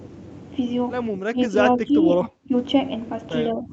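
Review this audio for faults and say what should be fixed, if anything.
The speech dips at 1.11 to 1.57 s, 1.75 to 1.94 s, 2.18 to 2.53 s and 3.48 to 3.72 s. The deepest cut, at 2.18 to 2.53 s, is about 30 dB. The likely cause is speech suppressed in double talk. The echo canceller took the talker for echo and turned both down. Use an echo canceller with reliable double-talk detection that holds its filter steady instead of suppressing near-end speech.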